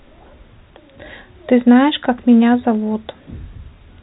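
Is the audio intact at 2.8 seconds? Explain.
Yes, the audio at 2.8 seconds is intact, with no fault at that moment; it carries the band-limited sound of G.711 telephone coding, which stops at 4 kHz.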